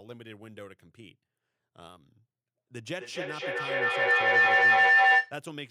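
From 2.98 s to 5.4 s a feedback howl builds as a microphone-to-loudspeaker loop gains level each pass, narrowing to roughly 2 kHz, pulsing about every 300 ms and peaking about 19 dB above the speech. Unlike echo, the repeats grow rather than fade.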